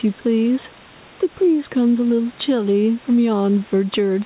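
Speech with gain pumping throughout. The gain swings around 5 dB. This is likely caused by microphone gain set too high, with a fast limiter pulling it back down. Unlike a noise gate, it never cuts the background to silence.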